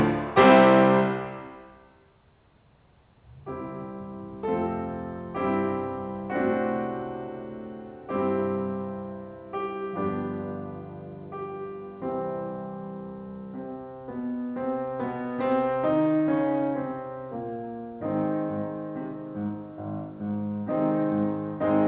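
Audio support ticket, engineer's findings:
Findings: no fault found in this music clip; the call path is working normally, with nothing above 4 kHz, which fits a G.711 A-law codec at 64 kbps.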